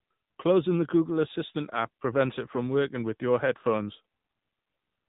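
A short speech clip carrying AMR narrowband mobile codec damage from start to finish. All energy stops at about 3.8 kHz, so the voice sounds boxed in and telephone-like, and the low bit budget gives it a plainly audible buzzy, synthetic edge, which fits one of the middle AMR-NB modes near 7.95 kbps. On a spectrogram the display is empty above that hard ceiling, and harmonics below it look smeared and blocky in 20 ms steps.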